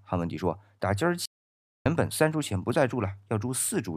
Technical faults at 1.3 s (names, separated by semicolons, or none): playback stall